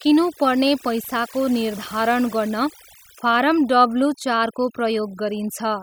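Noise reduction has been applied far too aggressively across the whole clip, cutting individual frequency bands down or out whenever they sit close to the estimated noise floor. Quieter parts of the speech are removed along with the noise, leaving a near-silent background flecked with twinkling artefacts.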